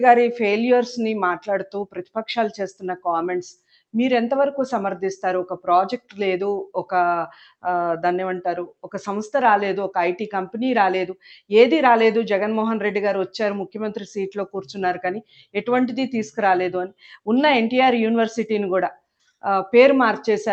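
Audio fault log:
Throughout: noise suppressor applied to music or sounds. A speech-tuned suppressor treats steady sound as noise. Level pumps by a few decibels, thinning held tones and tails.
1.66–2.16, 2.74–3.06, 3.54–3.94, 5.98–6.19, 8.66–8.90, 15.21–15.55, 16.88–17.27, 18.93–19.43 s: sound cut by the noise suppressor. Sustained passages dip about 17 to 21 dB.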